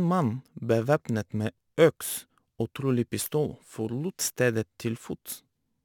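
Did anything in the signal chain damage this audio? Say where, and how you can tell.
Yes. The damage sits at the sample-rate conversion stage and runs through the whole speech clip. It is crude rate conversion: a gritty, inharmonic fizz rides on the louder and brighter syllables, roughly 25 dB below the speech. The error fits a 48 kHz to 44.1 kHz change done by simply dropping the nearest samples without filtering. Unlike clipping distortion, the added tones aren't harmonic to the speech, and unlike codec artefacts they follow level smoothly rather than swirling.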